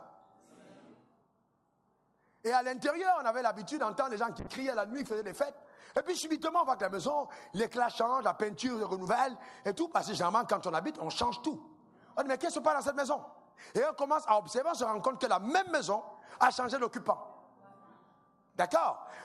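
From 4.4 s to 11.07 s the audio loses detail and turns rough, watery or muffled before clearing again by 11.07 s, with the worst stretch lasting about 1.9 s. This is a call bitrate drop: the call's bandwidth estimate fell, so the Opus encoder had far fewer bits to spend and coded the sound more coarsely. The change in quality fits a fall from around 96 kbps to about 18 kbps, with the bitrate recovering before the clip ends.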